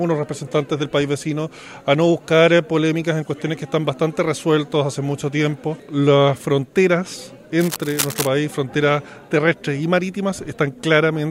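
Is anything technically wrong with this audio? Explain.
Yes. Cable scratch noise, 7.59 to 8.27 s: likely a worn connector being moved, its contact resistance fluctuating, adding uneven scratching about 10 dB below the signal over the sound.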